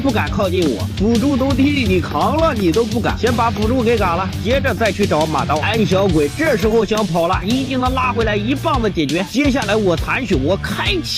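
Hard clipping runs through the whole clip: the signal is driven about 5 dB past what one stage can pass, so a small fraction of peaks are sliced flat. It is heard as crackle on loud moments; the waveform shows squared-off tops, the spectrogram high-frequency smears.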